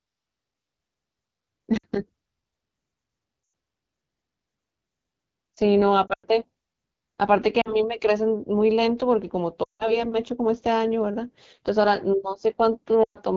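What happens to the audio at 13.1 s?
From 13.03 to 13.18 s, lost AMR speech frames cut about 120 ms, which fits six 20 ms frames. The decoder reuses the last good pitch and vocal tract settings with falling gain, so the sound drops to near silence within two frames. Throughout, the AMR wideband (HD Voice) codec at 8.85 kbit/s makes the speech rough and raspy, a steady coloration rather than a timed dropout.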